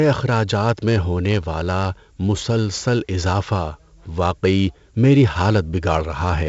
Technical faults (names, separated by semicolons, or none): 4-bit ADPCM compression